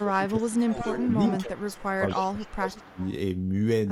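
A speech recording in which, from 0 to 2.99 s, the voice repeatedly dips by up to about 20 dB, roughly two seconds in total, likely speech suppressed in double talk; the waveform shows carved-out troughs. An echo leak returns a copy delayed by 231 ms at 0.46–0.53 s (about −30 dB), 0.73–1.85 s (about −10 dB) and 2.08–3.09 s (about −20 dB), likely from uncancelled loudspeaker pickup, appearing as shifted duplicates of the speech harmonics.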